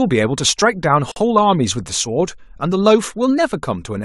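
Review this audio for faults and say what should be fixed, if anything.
Gap at a join of encoded pieces, from 1.12 to 1.16 s: the speech drops into a gap of about 47 ms with smeared edges, then resumes where it left off. The pieces were encoded separately, and each run's leading encoder delay and padded final frame were kept. To prevent it, trim the encoder delay and padding at every join, or encode the whole recording in one pass.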